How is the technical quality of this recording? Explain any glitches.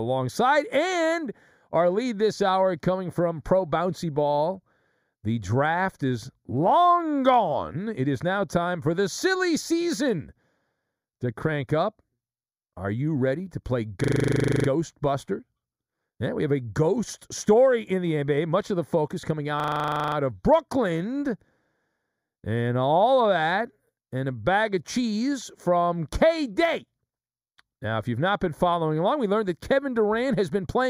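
The recording has two problems: a constant hollow colouring from a channel delay, and two short looping freezes from a system hang loop.

The channel delay (comb filtering) runs the whole way through. One channel arrives a fraction of a millisecond late, roughly 0.2 ms, and when the two get summed to mono, whatever they share cancels at evenly spaced frequencies. The first notch lands around 3 kHz, right where a lot of speech presence lives, so the speech comes across hollow and phasey, with that dip never moving.

The system hang loop shows up twice. Right after "you ready to play", from 14.04 to 14.68 s, and again after "of the focus coming", from 19.6 to 20.16 s, the computer or driver froze while the audio hardware kept replaying the same 40 ms buffer, 16 times the first time and 14 the second. The same slice of audio repeats exactly at 25 Hz. Nothing seems to go missing afterwards, and the speech picks up where it left off.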